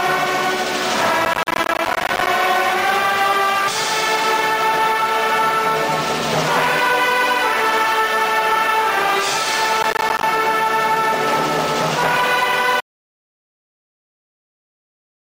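From 1.25 to 2.27 s, and again from 9.77 to 10.23 s, the processor falls behind and misses many buffer deadlines in a row. This is processor overload crackle. Each late buffer is replaced by a sliver of silence with hard edges, and the spacing fits buffers of around 10 ms. The first burst contains dozens of these gaps and the second a couple of dozen, so both sound like gritty, tearing crackle laid over the sound. Each burst stops as soon as the load eases.

At 12.8 s the input is lost, likely through a disconnected device or a failed link, while the recorder keeps writing silence. This audio dropout to silence cuts the sound off mid-flow, and what follows is dead silence with no room tone. It lasts to the end of the clip.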